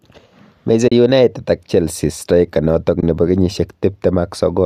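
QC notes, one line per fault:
0.88–0.92 s and 3.01–3.03 s, AAC frame loss with muting: two short soft-edged dropouts, the first about 40 ms just before "united ak", the second about 20 ms. The decoder zeroes the spectrum for the missing frames, and the overlapping windows fade the sound down and back up, so you get a hollow gap. The 10 ms steps suggest the low-delay AAC likely in use here (AAC-ELD), which adds only light codec damage.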